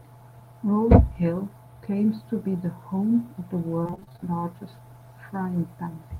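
From 3.83 s to 4.24 s the speech breaks up with repeated packet loss, giving a robotic sound. Packets go missing or arrive late again and again in this stretch. Each hole is bridged by stretching out the sound just before it. The holes come in quick succession, the longest about 31 ms. About half of this 0.41 s span is patched sound, roughly 0.2 s in all. The result is choppy, robotic speech with pieces missing.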